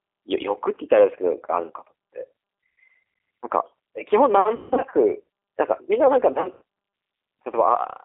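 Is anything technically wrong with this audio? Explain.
Yes. G.729 codec, throughout: the speech is rebuilt from a vocal tract filter, pitch predictor and sparse pulses, which fits an 8 kbit/s stream, so it sounds rough and synthetic within a 300 Hz to 3.6 kHz band.

VoIP packet loss concealed by the speech codec, at 4.56 to 4.94 s and 6.32 to 6.62 s: the decoder extrapolated its last pitch and filter through gaps of 150 and 90 ms at longest, leaving buzzy or noisy, fading stretches and weak speech afterwards.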